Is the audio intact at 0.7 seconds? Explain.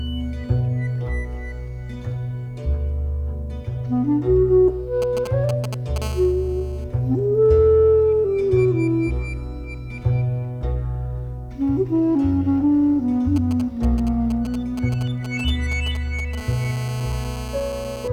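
Yes, the audio is intact at 0.7 seconds, with no fault audible at that moment.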